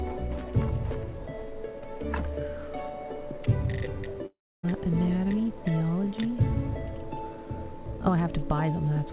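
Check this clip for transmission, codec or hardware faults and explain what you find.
One fault stands out, a long network dropout from 4.26 to 4.65 s, and that is its likely cause. The packet stream stalls, so about 0.38 s of audio never reaches the receiver. To cover the hole, the receiver stretches the last sound it had into a buzzy tail that fades away, leaving roughly 0.29 s of near-silence before playback resumes past the lost stretch. The band-limited G.711 call path, with nothing above 4 kHz, carries on through it.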